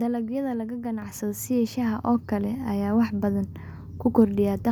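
At 1.02 s the call software judged the microphone too quiet and raised the device's input volume in a single step, a microphone volume stepped up fault. Because the change happens at the input rather than in later processing, the speech and the background room sound jump up together by about 7 dB. The shift is abrupt, so the level suddenly sits noticeably louder from that point on.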